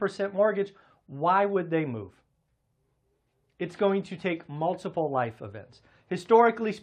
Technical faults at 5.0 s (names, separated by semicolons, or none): none